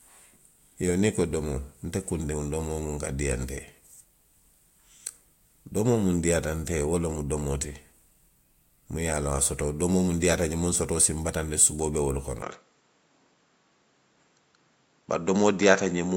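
At 12.42 s the input likely switched to a poorer device, cutting everything above 7.6 kHz. The speech dulls instantly, without a gap, over faint new background noise.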